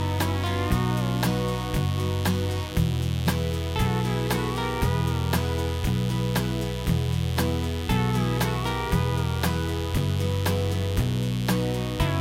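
Throughout, a raspy mains buzz at 50 Hz sits roughly 15 dB below the sound; its harmonics reaching into kilohertz distinguish it from a smooth, low hum.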